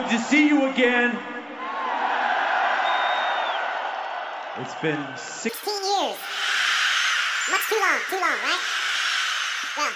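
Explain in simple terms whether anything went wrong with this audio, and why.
From about 5.49 s to the end, the sound jumps to double speed and an octave higher. That's a wrong sample rate: the audio is played back twice as fast as it was recorded, which fits 16 kHz material being played at 32 kHz with no conversion.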